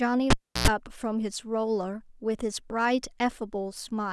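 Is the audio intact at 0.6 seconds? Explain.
No. From 0.30 to 0.68 s a cable pulled and plugged in cuts the speech: a pop, about 0.32 s of near silence, then a brief 60 Hz buzz as the tip reconnects. That buzz sets it apart from a plain dropout.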